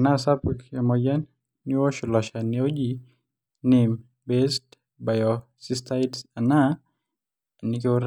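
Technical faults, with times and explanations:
Nothing stood out as a technical fault on listening through the recording.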